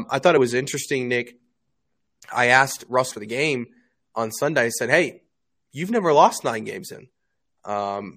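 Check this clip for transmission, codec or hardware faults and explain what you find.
Two short faults turn up in the speech, both of the same kind.

Damaged data in a compressed stream, at 3.10 to 3.12 s, between "I asked" and "the game on", and again at 6.93 s, right after "you've never lost". In each spot some bytes of the compressed speech are corrupted, so the decoder misreads those frames, loses sync and hunts for the next valid frame header. That brief misdecoding is heard as a clipped chirp or blip cutting into the speech.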